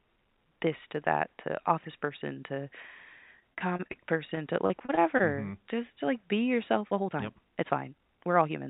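From 3.40 to 3.98 s there's repeated packet loss giving that robotic sound: seven gaps, the longest about 30 ms, with around 136 ms patched over by stretching out the last bit of audio and about 80 ms simply missing. Then it happens again from 4.35 to 5.22 s, five gaps this time, longest 31 ms, with roughly 115 ms filled and 100 ms lost. The fill-ins come one after another, so both stretches sound choppy, with chunks dropping out. It's all coming through a narrowband G.711 call path that has nothing above 4 kHz, so the whole thing is already a bit dull.

Right after "to like be", at 6.75 s and running to the end, the pace suddenly jumps to about 1.52 times normal speed while the pitch stays put. That's a time-stretched section, likely software squeezing the audio to fit a length by dropping short pieces, which is why it comes across as rushed rather than chipmunky.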